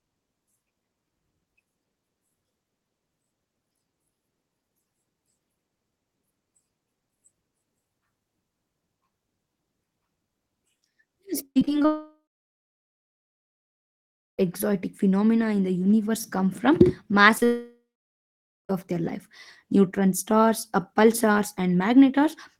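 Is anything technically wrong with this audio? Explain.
Yes, the speech suffers several network faults.

From 11.45 to 11.86 s, repeated packet loss gives a choppy sound with pieces missing: five gaps, the longest 100 ms, are patched with repeated sound, visible as smeared, stuttering spectrogram blocks.

Two long network dropouts, likely from lost connection, run 11.86 to 14.40 s and 17.45 to 18.71 s. A fading buzz gives way to near-silence, a flat waveform lasting about 2.2 s and 0.9 s.

At 17.38 to 17.43 s, short concealed packet loss fills 32 ms by extending the previous sound, heard as a brief smear, seen as a blurred spectral slice.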